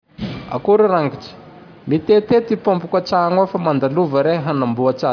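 No technical faults are audible anywhere in this recording.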